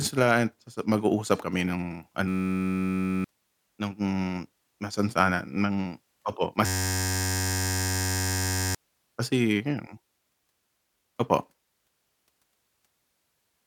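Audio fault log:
2.28–3.24 s: system hang loop. A 10.67 ms buffer repeats, making a steady 93.8 Hz buzz that replaces about a second of speech. The waveform shows identical cycles, and the spectrogram shows flat harmonic lines.
6.66–8.75 s: system hang loop. The same 10.67 ms loop, which fits a 512-sample buffer, buzzes at 93.8 Hz for about two seconds. The waveform repeats one cycle exactly, and the spectrogram shows evenly spaced horizontal stripes.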